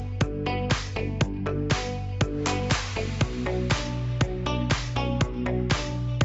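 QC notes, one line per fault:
No faults found; the audio has nothing above 8 kHz, as expected from the call microphone processing and the Opus WebRTC call path.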